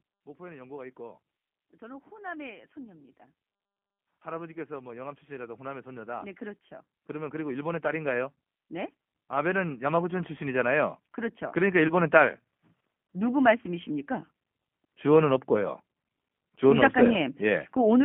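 Speech heard through a narrow 150 Hz to 3.4 kHz band with a rough, slightly synthetic buzz; this G.729 codec damage fits an 8 kbit/s stream, not plain band-limiting, which stays smooth. From 11.87 to 11.94 s, VoIP packet loss concealed by the speech codec turns about 20 ms of lost audio into a fading buzzy or noisy smear that recovers gradually, unlike a dropout's abrupt silence or click.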